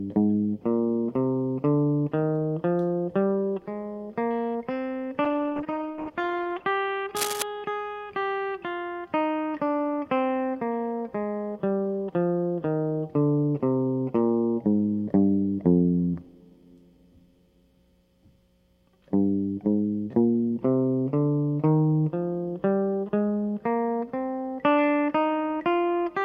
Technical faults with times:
5.25-6.72 call bitrate drop
7.16-7.42 cable scratch noise

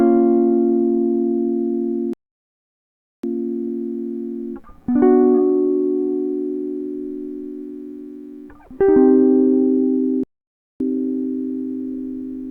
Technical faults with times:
2.13-3.24 rebuffering stall
10.23-10.80 rebuffering stall

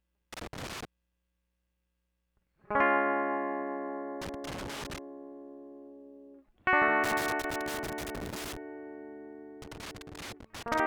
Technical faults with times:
0.33-0.85 loose connector crackle
4.21-4.98 loose connector crackle
7.04-8.57 loose connector crackle
9.62-10.80 loose connector crackle

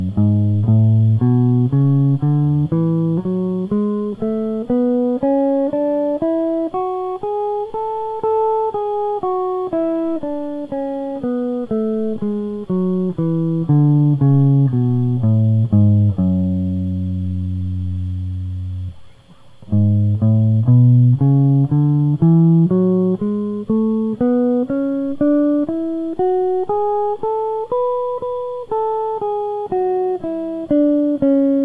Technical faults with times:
none

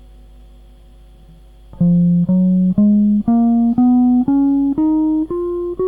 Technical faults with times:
0.00-5.87 mains hum

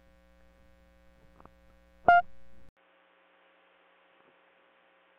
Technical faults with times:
2.69-5.18 input switched to a poorer device

